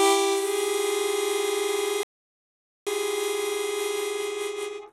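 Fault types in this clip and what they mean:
Rebuffering stall: The player ran out of downloaded audio and waited. The sound goes silent from 2.03 to 2.87 s, then resumes exactly where it stopped, adding 0.83 s.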